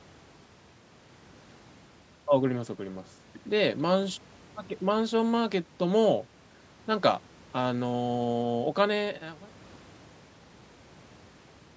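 No technical faults detected.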